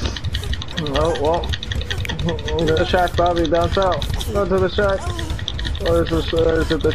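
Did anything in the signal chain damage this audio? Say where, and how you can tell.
Yes, compressed frames skipped at the codec or storage stage: at 0.68–0.71 s, 2.77–2.81 s and 5.60–5.64 s the sound jumps ahead by roughly 0.7 s, half a second and 0.3 s, multiples of a 46.4 ms frame. Whole frames were missing from the file or refused by the decoder as damaged, so playback skips straight past them, unlike a buffer dropout's gap.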